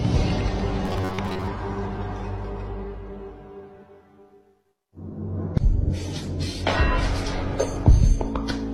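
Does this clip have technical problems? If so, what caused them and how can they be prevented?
Yes. From 0.85 to 1.48 s there's robotic sound from repeated short buffers, a rigid 93.8 Hz buzz, which fits a roughly 10.7 ms chunk looping while about half the real audio is skipped, likely from data arriving too slowly. A larger playback buffer prevents it.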